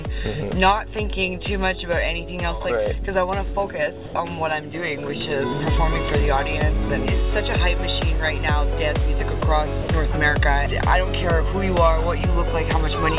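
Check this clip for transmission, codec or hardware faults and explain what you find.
Three short gaps where the audio is swapped for steady low-level noise, most likely sound dropped by the voice detector, at 4.06–4.14 s (80 ms), 9.40–9.42 s (20 ms) and 9.82–9.88 s (60 ms). The sending side's detector judged quiet content to be background and stopped transmitting, so the receiver filled the silence with generated comfort noise until the detector triggered again. Each gap sounds like a brief hole in the sound. The call path limits the audio to nothing above 4 kHz, which fits G.711 narrowband coding.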